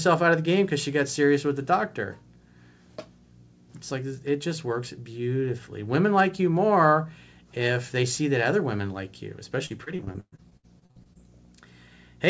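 From 9.66 s to 11.17 s, right after "other women like you", repeated packet loss (robotic sound) chops the speech. Repeated short holes, the longest 119 ms, are partly patched by stretching the last sound, so about a third of the span turns robotic, with pieces missing. The G.722 call path stays band-limited below 8 kHz.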